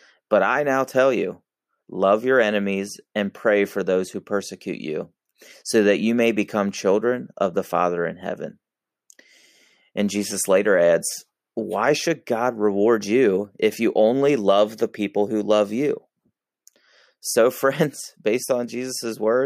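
No dropouts, clipping, glitches or other technical faults can be heard anywhere in the recording.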